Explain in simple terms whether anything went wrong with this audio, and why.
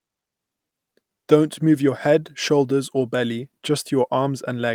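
Yes, one brief fault. From 3.43 to 3.45 s, just after "your head shoulders or", there is a lost packet rebuilt from error correction. A short piece of the transmitted speech, about 20 ms and consistent with a single packet, never arrived. The next packet carried a rough, lower-quality spare copy of it, and the decoder played that copy instead. So there is no gap or dropout, only a momentary grainy, noisier patch in the speech.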